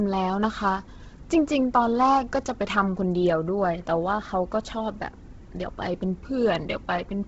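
Speech runs throughout with heavy Bluetooth LC3 compression damage, likely from an LE Audio link: the upper band sounds breathy and grainy where noise fills zeroed detail, and nothing exists above 7.7 kHz. A spectrogram shows a hard ceiling there with speckled, smeared texture, which fits a low bitrate near 16 kbps in 10 ms frames.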